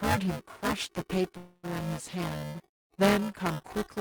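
The writing side of the playback ring buffer and the hardware reading it have drifted out of step, so they cross inside every period. This is buffer tearing, present for the whole speech clip. About a third of each buffer still carries audio from the previous lap, only a few milliseconds old, with hard joins at both edges. The result is a steady robotic buzz at 375 Hz riding on the voice, which fits a 128-sample buffer.

From 1.37 s to 1.65 s a call audio freeze occurs, most likely because packets were delayed in transit and the receiver's jitter buffer ran dry. For about 0.26 s the last sound is stretched into a fading buzzy hiss that never drops to silence. The speech then picks up exactly where it stopped, with nothing lost, so everything afterward arrives 0.26 s later than before.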